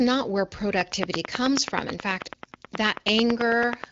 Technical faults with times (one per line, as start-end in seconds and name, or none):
0.81-3.92 train of clicks